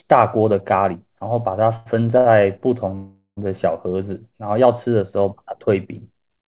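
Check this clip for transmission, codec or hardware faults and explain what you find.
Three timing faults turn up in this speech, all from packets arriving late on a call path whose band stops at 4 kHz, which fits narrowband G.711 mu-law at 64 kbps.

Two short stalls from a late packet occur, from 1.76 to 1.89 s and from 2.18 to 2.41 s. Each time the jitter buffer ran dry and the receiver stretched the last sound, by about 97 ms and then 79 ms, until the packet arrived. The speech is held slightly too long with a slight buzz or dip, and nothing is lost.

A call audio freeze runs from 2.95 to 3.40 s, likely caused by packets held up in transit emptying the buffer. The receiver extended the last sound for about 422 ms as a buzz or hiss that fades, including roughly 90 ms of silence, then resumed where it stopped.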